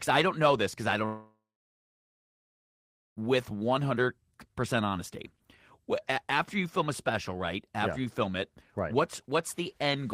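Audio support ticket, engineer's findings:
Long network dropout, 1.05–3.23 s, right after "know this because I". Concealment extends the last sound as a fading buzz or hiss, then about 1.75 s of silence; audio resumes with roughly 2.1 s lost. Likely packet loss on the network receive path.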